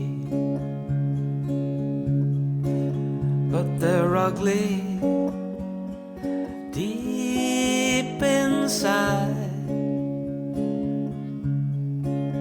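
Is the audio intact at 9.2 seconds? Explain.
Yes, the audio is intact at 9.2 seconds, with no dropout, click, distortion or other fault at that point.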